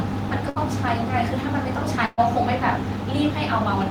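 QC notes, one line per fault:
0.49–0.59 s and 2.05–2.20 s, burst of packet loss: the last sound is held and faded for about 60 ms, then 120 ms, rather than falling silent, and speech resumes with that stretch skipped.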